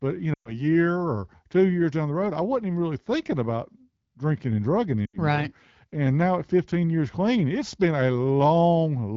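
At 0.34 s, after "but you", the speech drops to near silence until 0.54 s, then returns weak before "year or two years". At 5.06 s, after "about drinking and drugging", a shorter drop to near silence runs to 5.17 s. Both are lost AMR speech frames: failed frames made the AMR-WB decoder repeat its last good pitch and vocal tract settings at falling gain. The gaps fit about six and four lost 20 ms frames.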